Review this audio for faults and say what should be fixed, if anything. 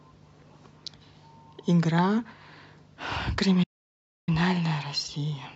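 The speech cuts to silence from 3.63 to 4.29 s, about 640 ms, then resumes: a playback stall, likely the player starving for data or its thread blocking. Larger playback buffering and keeping the audio thread free of blocking work would prevent it.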